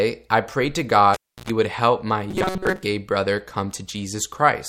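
At 1.14 s the cable is pulled and plugged in. A pop cuts the speech, and about 0.31 s of near silence follows. Within that gap comes roughly 97 ms of 60 Hz mains buzz while only the tip touches, and a second pop at 1.50 s. That hum burst sets it apart from an ordinary dropout.

From 2.31 to 2.83 s the speech becomes a stiff metallic buzz locked at 188 Hz. This is likely robotic sound from repeated short buffers: a slice of about 5.3 ms is replayed while most of the real audio is skipped. Unlike steady mains hum, it roughly tracks the speech.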